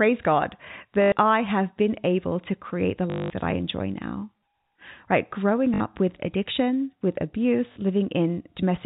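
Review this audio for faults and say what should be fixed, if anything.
A short robotic stutter with a 50 Hz buzz at 1.02–1.12 s, 3.1–3.3 s, 5.74–5.8 s and 7.72–7.76 s comes from packet loss with the last packet repeated, consistent with 20 ms packets. Better packet loss concealment and a larger jitter buffer would prevent this.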